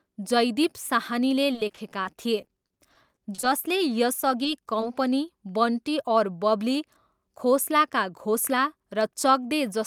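From 1.53 s to 3.48 s the speech breaks up with repeated packet loss, giving a robotic sound. The stream drops out about sixteen times, each gap 30 ms or shorter. The receiver covers each hole by stretching the last sound it had. About 300 ms gets patched this way, while about 220 ms is simply gone. The concealment fills roughly a sixth of the span. The result is choppy and robotic, with bits of speech missing.

From 8.02 s to 9.02 s, right after "बन्टी और बबली खोसला", a jitter buffer speed-up occurs. Audio had piled up in the receive buffer beyond its target delay. To catch up, the receiver cut out short slices, each one or a few pitch periods long. Around 70 ms disappears in total. The speech runs at about 106% speed with its pitch unchanged, so it sounds hurried.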